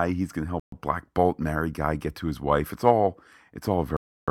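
Speech, with two dropouts where the sound cuts to silence and then resumes, consistent with a Bluetooth stall. The first, just after "he's going to", runs from 0.60 to 0.72 s, a gap of about 0.13 s. The second runs from 3.97 to 4.28 s, about 0.31 s of silence. The likely cause is radio interference delaying packets until the receiver's buffer emptied, so playback paused until retransmitted audio arrived.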